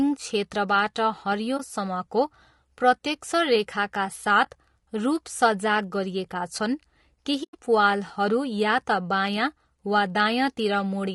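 Throughout the speech there is plainly audible coding damage. The voice sounds rough and grainy, noise fills the gaps between the pitch harmonics, and the upper band has a thin, somewhat synthetic quality. This is likely low-delay AAC compression (AAC-ELD) at a rate of around 32 kbps. Its short frames separate the harmonics poorly. That produces a steady graininess that differs from the brief, scattered artefacts of a struggling network link.

Over this texture there are three AAC frame losses with muting, at 1.57–1.60 s, 4.44–4.47 s and 7.43–7.55 s. In each, the decoder had no data for the missing stretch and filled it with silence. The overlapping windows fade the sound out and back in, so each hole has soft edges. That sets them apart from hard-cut dropouts, and from concealment that repeats or smears the previous sound. The first two fit a single lost 20 ms frame. The third is longer, about five frames or 100 ms, and is a soft-edged hole.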